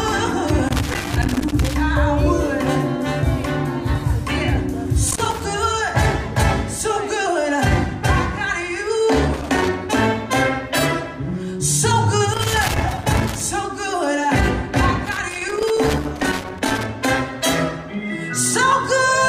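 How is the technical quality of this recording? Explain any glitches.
The recording has loose connector crackle in five places: 0.43 to 1.74 s, 5.08 to 5.44 s, 9.34 to 9.74 s, 12.34 to 13.42 s, and 15.06 to 16.86 s. A worn or dirty contact keeps breaking and remaking the circuit. This chops the signal into irregular bursts of scratchy crackle.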